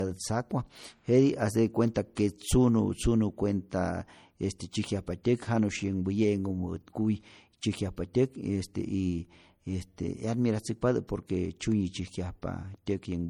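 Throughout this speech recording the sound carries the smeared, watery coarseness of heavy lossy coding, even though the file itself is large, and nothing is present above about 19.7 kHz. The likely cause is low-bitrate audio saved at a high bitrate: an MP3 encoded at something near 48 kbit/s was re-encoded as MP3 at a much higher rate, near 273 kbit/s. The second pass cannot restore detail the first one discarded, so the artefacts of the original encoding remain.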